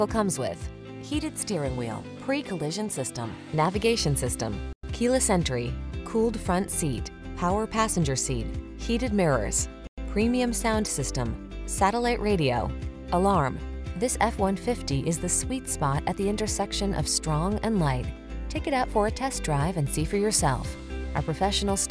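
No technical faults can be heard anywhere in the recording.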